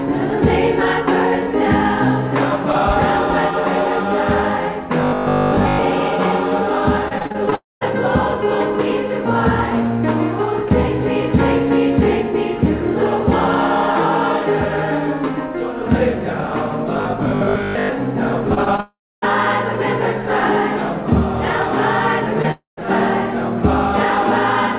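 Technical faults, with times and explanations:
5.01–5.83 s and 16.93–17.93 s, robotic sound from repeated short buffers: a rigid metallic buzz with a fixed pitch near 50 Hz. Most of the first stretch and about half of the second are repeats, likely of a 20 ms buffer re-played while fresh audio lagged. A spectrogram shows evenly spaced harmonic lines at 50 Hz multiples, and the waveform shows roughly repeating 20 ms cycles.
7.08–7.53 s and 18.55–18.80 s, repeated packet loss (robotic sound): choppy, metallic sound. Six holes in the first stretch and three in the second, none longer than 35 ms, were each patched by extending the preceding sound. This concealed roughly a quarter of each span. On a spectrogram, brief smeared columns break up the texture. The waveform shows short looped segments.
7.55–7.83 s, 18.80–19.24 s and 22.51–22.87 s, long network dropout: the sound carries on briefly as a fading buzz, then drops to silence for about 190 ms, 280 ms and 140 ms respectively before resuming with material missing. 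This is likely a network stall. A spectrogram shows a smeared tail fading into an empty band, and the waveform flattens.
22.42–22.45 s, short concealed packet loss: a quick smear or wobble where about 20 ms never arrived. The gap was bridged by continuing the prior sound and crossfading back. A spectrogram shows a tiny blurred patch, and the waveform shows a slight discontinuity.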